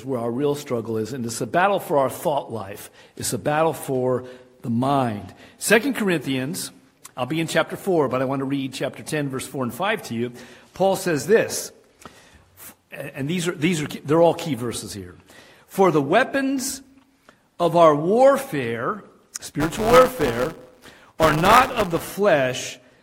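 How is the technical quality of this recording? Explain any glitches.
One glitch stands out near the end. Buffer tearing runs from 19.60 to 22.13 s: a steady robotic rattle at 172 Hz, which fits a 256-sample buffer. Writer and hardware slipped, so roughly a tenth of each period replays audio about 10 ms old. Waveforms show hard steps every 5.8 ms, and spectrograms show evenly spaced vertical lines.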